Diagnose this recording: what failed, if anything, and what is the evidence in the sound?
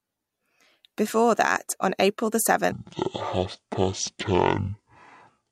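From 2.72 s to the end, the speech suddenly drops to half speed (0.504x), with pitch falling about ten semitones, so the section at the wrong speed sounds deep and dragged. The likely cause is a playback-stage clock mismatch, where that portion is read out at roughly half the rate it was captured. On a spectrogram, harmonics and formants compress downward at the boundary and syllables stretch to twice their width; the waveform shows periods visibly lengthened.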